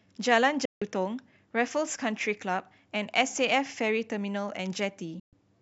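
Speech, cut by two digital broadcast dropouts at 0.65 to 0.82 s and 5.20 to 5.33 s, where the receiver muted after losing frames. Each is a near-instant blank column on the spectrogram and a flat waveform gap.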